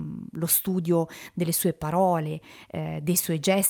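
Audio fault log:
Throughout: clock drift between sender and receiver. The speech has a faint, uneven sense of dragging, with small timing hiccups that do not fall at regular intervals. The sending end's audio clock runs about 1% slow against the receiving end's, so audio arrives a little more slowly than it is played out. The receive buffer keeps edging toward empty, and the receiver must fill the gap rather than simply playing a steady stream.
0.32 to 2.82 s: repeated timing corrections. Across this stretch the tempo sounds slightly unsteady, running at about 99% of normal speed, with tiny stutters where short fragments seem to recur. To cover the slow supply, the receiver repeatedly duplicates brief pieces of audio, always lengthening rather than trimming, at irregular spacing. In total these insertions add roughly 50 ms, each one too small to stand out alone but together giving a faintly halting flow.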